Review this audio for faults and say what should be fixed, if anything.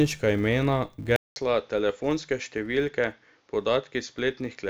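Throughout the clip, a filter restarted on every block leaves a buzz at 188 Hz, which fits a 256-sample buffer. Each block starts from zero state and opens with a small transient. The waveform shows regular spikes at block boundaries. The spectrogram shows a line at 188 Hz and its harmonics, brightest where the speech is loudest. Carry the filter state across blocks instead of resetting it.

At 1.16 s the sound goes silent for 200 ms, then stays duller to the end at 4.70 s. This is likely an input switched to a poorer device. The level falls by about 5 dB, and a new noise floor sits roughly 40 dB below the signal. The waveform shows a flat gap and then a smaller envelope. The spectrogram shows the top band disappearing after the gap. Lock the input device for the whole recording and disable automatic switching to headset call profiles.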